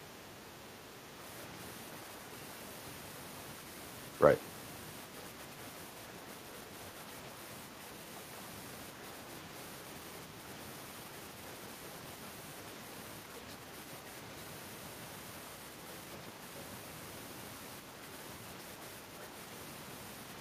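A speech recording with no technical faults to report anywhere in the signal.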